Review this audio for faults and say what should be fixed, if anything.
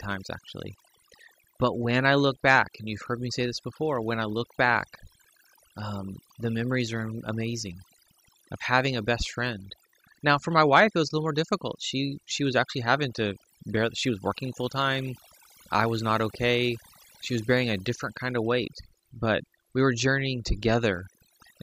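Overdone noise removal runs through the whole recording: a noise reduction stage set far too aggressively has been cutting individual frequency bands down or out whenever their level sits close to its noise estimate, and the softer parts of the speech fall under that threshold too. The result is a background pulled down and broken up into twinkling, chirpy specks. To prevent it, lower the reduction amount and recheck the noise profile before processing.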